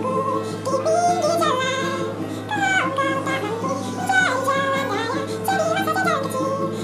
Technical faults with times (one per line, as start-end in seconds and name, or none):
0.00-6.84 wrong sample rate